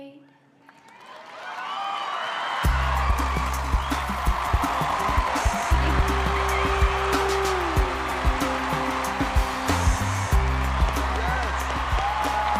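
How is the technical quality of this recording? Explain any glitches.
The recording has two clear glitches. From 3.03 to 6.39 s there is a time-stretched section. The sound runs about 1.76 times faster, yet its pitch holds steady. Software likely squeezed it to fit a length by dropping short slices. It comes across as rushed.

From 10.40 to 12.47 s a train of clicks sits over the audio. Around twenty near-identical pulses arrive at a regular 8.26 per second, peaking roughly 10 dB above the signal. Interference or a faulty connection is the likely source. They tick steadily, even through pauses.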